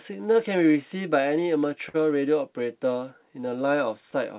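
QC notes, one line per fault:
Throughout: clock drift between sender and receiver. The sending device's audio clock runs slower than the receiver's, by roughly 4 percent. Audio arrives a little too slowly, so the receiver's jitter buffer keeps draining and has to be topped up by stretching what it already holds. The result is an uneven, slightly dragging pace across the clip, heard within the narrow call bandwidth, where nothing sits above 4 kHz, which fits a G.711 mu-law path.
0.11 to 3.77 s: repeated timing corrections. To keep pace with the slow sender, the receiver repeatedly lengthens short pieces of audio, all in the same direction and at irregular spacing. Playback runs at 97 percent speed over this stretch, adding around a tenth of a second in total. Each individual edit is small, so it is heard, if at all, as a slightly unsteady tempo or occasional slight hiccups rather than distinct glitches.
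1.89 to 1.96 s: short stall from a late packet. A packet missed its playout time and the jitter buffer ran dry. The receiver held the last sound for 51 ms until the packet turned up, then resumed from the same point, so nothing is lost. The held sound is too long and may carry a faint buzz or dip, and playback sits 51 ms later afterwards.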